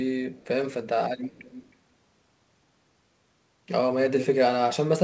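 From 0.36 to 0.47 s a faint echo leak trails the speech by 330 ms, and from 1.23 to 1.74 s a much clearer one follows at 315 ms, likely from a far-end loudspeaker whose echo canceller let its pickup through. Unlike room reverb, it is a discrete, delayed copy rather than a smooth decay, and like the rest of the audio it is band-limited below 8 kHz.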